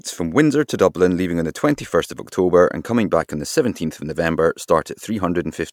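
No technical faults are audible anywhere in the speech.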